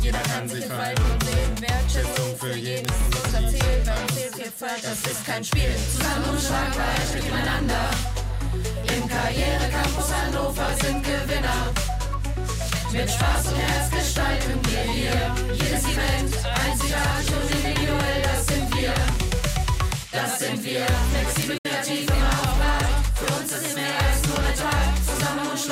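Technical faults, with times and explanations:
21.58 to 21.66 s, digital broadcast dropout: the receiver stopped getting frames that passed their checksum and muted its output until valid data resumed. The sound fades out over about 8 ms rather than clicking off, leaves a gap of roughly 64 ms of missing programme, which fits a couple of lost frames, and then returns mid-flow. Whatever was transmitted during that hole is gone for good, so the audio jumps ahead instead of pausing and resuming.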